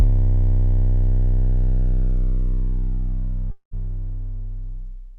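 The audio has a long network dropout from 3.51 to 3.74 s, likely caused by a stretch of packets that never reached the receiver. The receiver covered the gap by extending the last sound it had for about 199 ms, which is heard as a fading buzz or hiss, followed by about 100 ms of silence. When the audio resumes at 3.74 s, about 200 ms of the original sound is missing.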